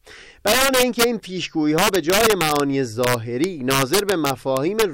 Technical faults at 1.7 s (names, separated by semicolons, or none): integer overflow